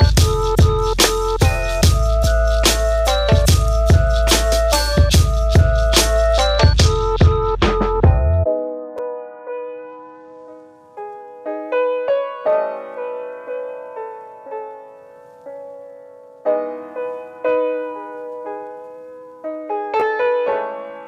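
Chunks out of order at 8.98 s and 20.00 s: a 5.8 ms block plays one and then two blocks late, producing a brief jumbled moment at the hard joins.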